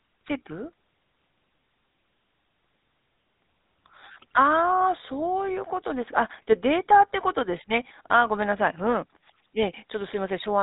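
From start to finish the speech has a buzzy, gravelly roughness, and nothing is heard above about 3.8 kHz. This is the GSM full-rate codec, at a damage level consistent with its 13 kbps rate: it models the vocal tract and drives it with sparse, regularly spaced pulses.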